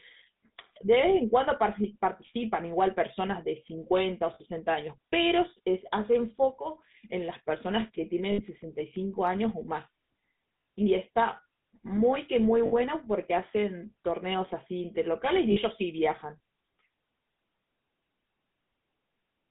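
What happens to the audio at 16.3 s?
At 16.3 s, as across the whole recording, the speech has been squeezed through a GSM full-rate codec, whose damage is plainly audible. The codec models the vocal tract and excites it with a coarse, regularly spaced pulse train, which fits a rate of about 13 kbps, and the line passes only about 150 Hz to 3.7 kHz. The result is thin, band-limited speech with a buzzy, gravelly roughness.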